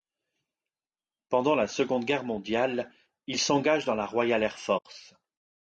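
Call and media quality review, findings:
Low-delay AAC compression, whole clip: speech rough and grainy, noise filling gaps between harmonics, thin synthetic top band. Likely AAC-ELD with short frames resolving pitch poorly; damage fits about 32 kbps. Grain is steady, unlike intermittent packet loss.

AAC frame loss with muting, 4.77–4.86 s: soft-edged gap in speech, faded out and back in. Decoder zeroed lost spectra and overlapping windows smoothed the edges; about 80 ms, fitting four lost frames. Concealment by repetition would buzz instead.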